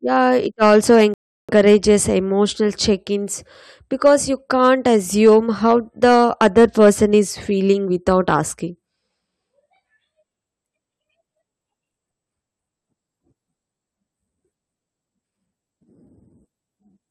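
Hard clipping starts at 0.62 s and runs to 1.91 s, just before "emotional check ins." The speech is pushed about 5 dB past what the chain can pass, so the peaks get sliced flat and a harsh fuzz sits on the louder syllables. Inside that stretch, at 1.14 s, there's a rebuffering stall. The player ran dry, dropped to silence for about 0.35 s, and then picked up exactly where it left off. Nothing goes missing, but the pause is added. The clipping returns in short bursts at 4.06 s and 4.64 s, about 3 and 2 dB over. It comes back hard from 5.25 to 7.18 s at about 5 dB, then again from 8.09 to 8.39 s at about 3 dB. You get crackle on those peaks.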